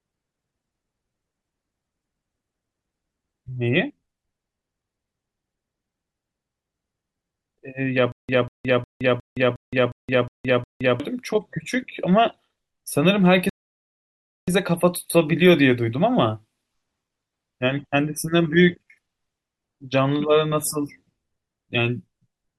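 At 8.12 s the speech breaks into a stutter with silent gaps that runs to about 11.0 s. You hear the same 192 ms snippet of speech eight times over, each followed by 167.5 ms of dead digital silence, so it ticks along at a steady 360 ms cycle. That pattern most likely comes from a stalled player retrying and replaying its last fragment before running dry, and whatever speech belonged in that stretch is gone for good.

Then from 13.49 s to 14.48 s there's a rebuffering stall: the audio just drops to silence for roughly a second, 983.6 ms, and picks up again exactly where it left off. That's the player running out of downloaded data and waiting for more. Nothing gets skipped here; the clip simply gets about a second longer.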